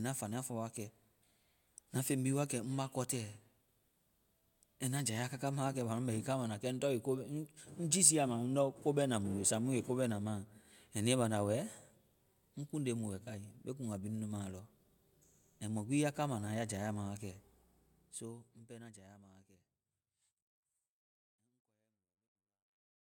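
Nothing in this speech recording stands out as a problem, and the gentle fade-out starting somewhere around 17 or 18 seconds and finishing at 23.2 s sounds like an ordinary editor's touch.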